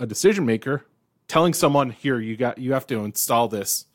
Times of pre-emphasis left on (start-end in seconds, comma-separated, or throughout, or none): 2.75-3.94